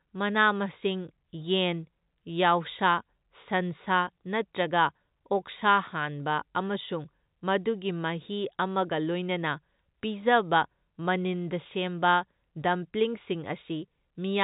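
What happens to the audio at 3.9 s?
Nothing goes wrong at 3.9 s: the speech there is intact, carrying only the steady telephone-band character of G.711 coding with nothing above about 3.8 kHz.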